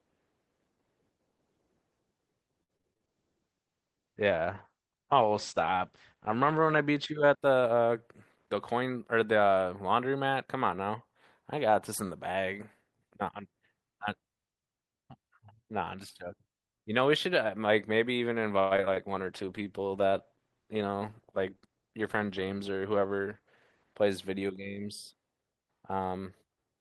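Choppy stretches break up this speech at 2.63–3.07 s and 18.59–18.98 s. Short pieces drop out and the gaps are smeared over with a continuation of the last sound. This is repeated packet loss: about five holes in each burst, the longest around 58 ms in the first and 114 ms in the second, with roughly 38% and 43% of each span patched by concealment. Overlapping the end of the first burst, from 3.05 to 7.44 s, the voice turns rough, watery and dull, with the top end gone. That is a call bitrate drop. The encoder fell from 32 to 12 kbps and stayed at the floor for about 3.7 s, and its audio bandwidth shrank from 20 kHz to 8 kHz, which is why the brightness disappears. A similar drop from 32 to 15 kbps follows the second loss burst, running 19.12–23.91 s and staying low for about 4.8 s, with the same coarse, grainy quality. At 8.35–8.97 s and again at 20.82–21.83 s the speech briefly sounds hurried while keeping its pitch. 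That is a jitter buffer speed-up. To shed excess delay, the receiver trimmed small pitch-period slices, around 70 ms in the first stretch and about a tenth of a second in the second, playing those spans at roughly 110% and 108% speed.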